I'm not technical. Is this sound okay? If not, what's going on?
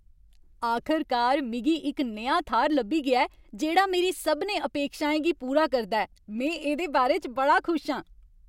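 Yes, nothing in this recording sounds wrong.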